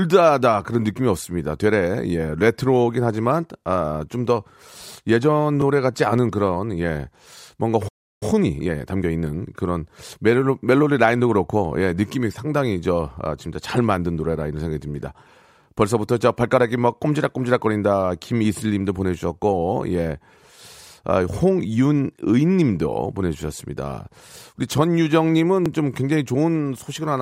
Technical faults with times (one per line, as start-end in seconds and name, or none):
5.62 overlapping chunks
7.88-8.23 playback stall
8.23-9.53 time-compressed catch-up
15.64 overlapping chunks
25.66 overlapping chunks